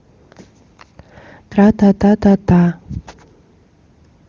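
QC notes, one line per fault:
Nothing to flag on this speech clip; it runs over what sounds like AMR wideband (HD Voice) at one of its higher rates, with codec traces faint at most.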